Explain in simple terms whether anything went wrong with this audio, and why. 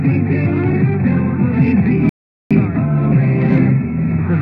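At 2.09 s the audio stops dead for about 0.41 s, then picks up exactly where it left off at 2.51 s. That's a rebuffering stall: the player ran out of downloaded audio and waited.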